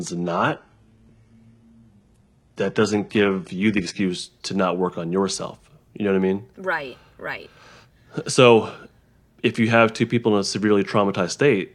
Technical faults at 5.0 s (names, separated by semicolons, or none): none